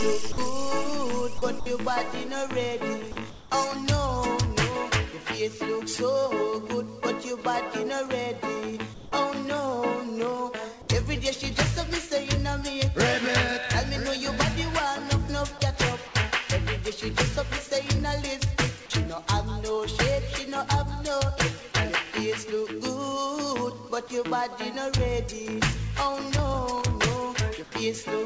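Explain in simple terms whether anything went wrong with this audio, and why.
Five brief gaps appear, at 0.32, 1.38, 1.60, 3.12 and 15.58 seconds. Each lasts well under a tenth of a second. That is likely sound dropped by the voice detector. The system mistook real sound for background, stopped sending it, and filled the hole with smooth hiss.

At 3.30 to 3.50, 8.94 to 9.12, and 27.64 to 27.72 seconds, the natural background turns into a flat, slightly quieter hiss. This is likely comfort noise in place of the background. During pauses the sender goes quiet, and the receiver invents stand-in noise.

From 26.37 to 26.91 seconds there is a burst of loose connector crackle. A worn or dirty plug contact kept cutting in and out, chopping the sound into irregular scratchy pops for about half a second.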